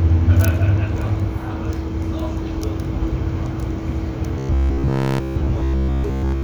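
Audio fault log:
4.39–6.43 s, robotic sound from repeated short buffers: the sound turns into a rigid metallic buzz at about 66.7 Hz, likely from audio arriving too seldom so that a roughly 15 ms stretch is replayed in place of most of the real signal.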